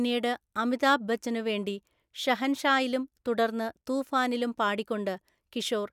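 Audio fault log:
No technical faults can be heard anywhere in the speech recording, and the signal holds steady throughout.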